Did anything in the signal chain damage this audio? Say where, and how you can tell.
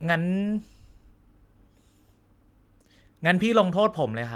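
No, I can't hear anything in the chain that damaged this speech; it sounds like nothing went wrong on its way to you.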